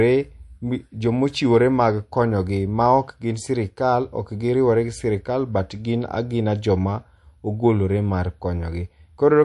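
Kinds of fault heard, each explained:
MP3 compression: the speech has a plainly audible watery, swirling texture with nothing above 11.3 kHz, likely from MP3 encoding at a bitrate near 48 kbps, where the encoder cuts the treble and drops weak frequency lines that flicker between frames.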